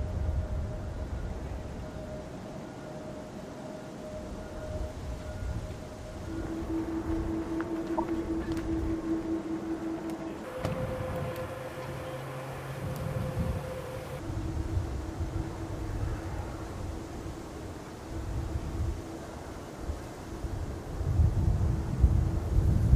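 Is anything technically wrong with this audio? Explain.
Yes, there are two problems. At 7.98 s there's a corrupt frame decoded: a couple of damaged compressed frames got played anyway, so misread values throw energy into the wrong frequencies. You hear it as a quick chirpy blip, gone almost instantly.

From 10.44 s to 14.19 s you've got a section at the wrong speed: the audio runs at 1.58 times normal, pitched up about seven semitones, so it sounds high and rushed. The likely cause is that this stretch was played against the wrong clock.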